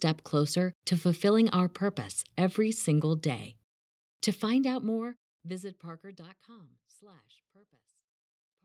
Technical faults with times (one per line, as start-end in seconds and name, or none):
none